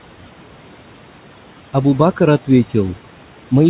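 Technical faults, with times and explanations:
throughout: noise suppressor artifacts. The room noise, sitting about 20 dB under the speech, drops by about 12 dB in the gaps and swells back up whenever speech comes in, so the background seems to breathe with the talker. The suppressor is working frame by frame, squashing the bands it judges to be steady noise and easing off once speech covers them. Nothing reaches above 4 kHz, which fits a G.711 A-law call codec.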